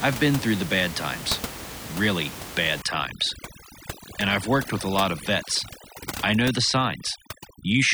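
From 2.82 s, right after "bad times really bad," the background drops and breaks up into twinkling, warbling specks until the end of the clip at 7.93 s. This is overdone noise removal: a noise reducer set too aggressively is pulling individual frequency bands down or out whenever they sit close to its noise estimate. That sweeps away the room noise, which sat about 12 dB below the speech, and the quieter parts of the speech with it.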